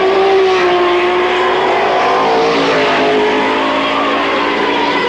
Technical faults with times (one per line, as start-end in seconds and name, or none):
0.00-5.09 wrong sample rate